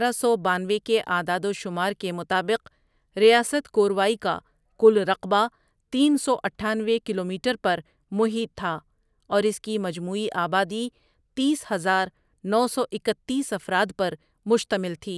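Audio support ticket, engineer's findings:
Listened to the whole speech clip and found nothing to flag, so no action needed on this ticket.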